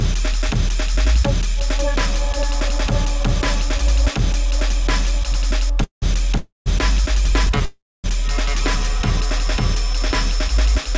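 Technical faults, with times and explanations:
5.84–6.04 s, 6.38–6.68 s and 7.65–8.06 s, call audio freeze: each time the sound stops and the last moment carries on briefly as a fading buzz, then drops to silence for about 130 ms, 170 ms and 250 ms, for gaps of 0.18 s, 0.28 s and 0.39 s. Afterwards the sound resumes from where it broke off, with nothing skipped and everything after each gap running later. This points to packets likely being held up in transit until the jitter buffer ran dry; separately, the call codec cuts off everything above 8 kHz.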